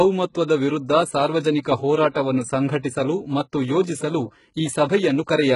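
Throughout the speech the treble sounds synthetic. The top of the spectrum stops at about 11.1 kHz, and the sibilants have a gritty, metallic quality. This is likely HE-AAC compression at a very low rate, which fits something near 12 kbps. Only the lower band is coded; the upper band is rebuilt by copying lower content upward and shaping it with a coarse envelope. Its harmonics therefore do not line up with the real ones, and the codec damage is heavy.

At 0.48 s there is pre-echo: a short burst of hiss, about 15 ms long, arrives just ahead of a sharp attack. The transform codec spreads its quantisation noise across a whole block. When the onset sits late in that block, noise sized for the loud part also fills the quiet gap before it. The attack loses its crispness and sounds smeared, with a brief noisy lead-in.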